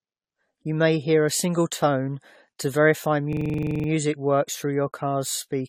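Repeated lossy AAC re-encoding, likely around ten passes, has caused generation loss: the whole clip sounds swirly, smeared and hollow, with blurred attacks and nothing above 17.9 kHz. From 3.33 to 3.88 s, after "single tone to verify", a system hang loop froze playback while the hardware cycled one 42.7 ms buffer, which fits 2048 samples. It repeats as a 23.4 Hz stutter until "works through your" resumes with almost no speech missing.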